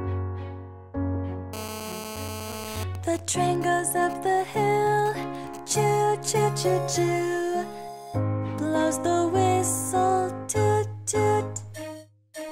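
From 1.53 s to 2.84 s a hard, raspy buzz sits on top of the sound, pitched at 216.7 Hz and thick with harmonics. It holds steady and has no relation to the audio around it, only about 9 dB below the signal. This is GSM phone buzz: a 2G handset close by is on an active call, transmitting radio bursts 217 times a second, and the audio circuitry rectifies those pulses into an audible tone.

Almost immediately after, from 2.95 s to 5.96 s, the continuous buzz gives way to even ticks with a longer 217 Hz buzz twice a second, weaker than before, somewhere around 15 dB under the signal. These are GSM signalling bursts. The same phone is still in its call, but its user has gone silent, so it sends only short groups of radio bursts instead of a constant stream, and the circuit rectifies each group into a short burst of buzz.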